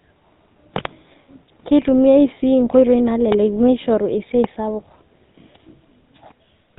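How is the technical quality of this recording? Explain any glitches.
The recording is plainly degraded by a GSM full-rate codec, audible from start to finish.

Throughout the speech, the codec models the vocal tract and drives it with a regularly spaced pulse excitation that keeps only every third sample, so the fine harmonic detail is lost. The result is a plainly audible buzzy, gravelly roughness, which fits a 13 kbps GSM full-rate codec. On a spectrogram, energy stops at a flat ceiling at 4 kHz, with smeared, grainy harmonics below it.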